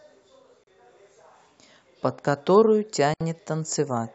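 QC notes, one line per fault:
0.64 to 0.67 s, Bluetooth stall: the speech drops to silence for about 35 ms, then carries on where it left off, likely the headphones' buffer running dry while delayed packets were resent.
3.14 to 3.21 s, Bluetooth stall: the same dropout again, with a longer 68 ms gap before the audio resumes.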